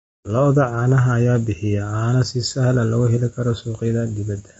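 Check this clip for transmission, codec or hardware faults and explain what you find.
There's one codec fault, running through the whole speech clip: low-delay AAC compression, likely AAC-ELD at a rate fitting roughly 24 kbps. Short frames smear the pitch harmonics, so the voice sounds rough and grainy with noise between them, and nothing comes through above 7.8 kHz.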